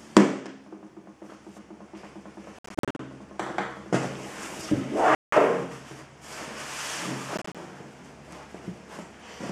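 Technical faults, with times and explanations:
2.59–2.99 s, 5.15–5.33 s, 7.37–7.55 s: Bluetooth dropouts, likely from late packets being discarded. The first is 261 ms of broken gaps (longest 58 ms), the second a solid 174 ms hole, and the third 87 ms of short gaps (longest 29 ms). After each gap the sound resumes as if it had played on.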